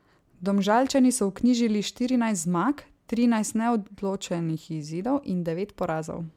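A speech recording with no technical fault to report. There is nothing in it that calls for a time, a cause or a fix.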